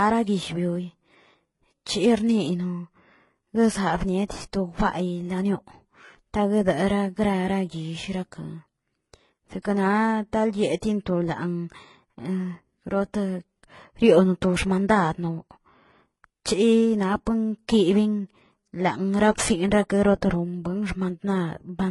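Throughout, there is transcoding between lossy codecs. Nothing remains above 11.3 kHz. Swirly smearing sits under MP3 grit, likely from HE-AAC re-encoded as MP3.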